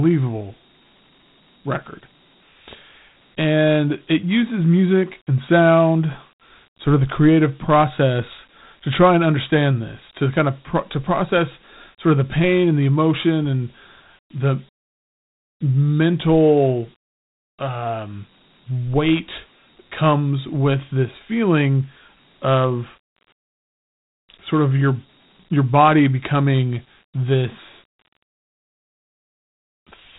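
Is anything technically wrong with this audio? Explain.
Yes. Dialogic VOX ADPCM damage runs throughout. Each sample is coded as a 4-bit step from a prediction, and nothing is left above 3.9 kHz, which points to 32 kbps at 8 kHz sampling. The speech sounds narrow and telephone-like, trailed by an audible gritty hiss.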